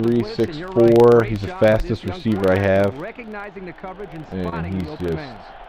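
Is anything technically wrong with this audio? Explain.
Yes, two things. Throughout, there's a filter restarted on every block: it drops its state at each block boundary and starts from silence, so each block opens with a little transient. You get a 25 Hz buzz of regular ticks that rises and falls with the signal level.

Then at about 4.49 to 4.54 s there's a short concealed packet loss. Roughly 20 ms of audio never arrived, and the receiver bridged it with about 24 ms of extrapolated sound before blending back in, so you hear a brief smear or wobble there.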